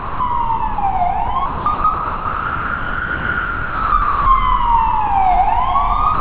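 The sound keeps falling away to steady comfort noise at 0–0.2, 0.74–0.78, 1.46–1.66, 1.74–1.84, 1.94–3.92 (the long one, about 2 s), 4.02–4.26 and 6.14–6.21 s. That's likely sound dropped by the voice detector, which mistook it for background and stopped sending.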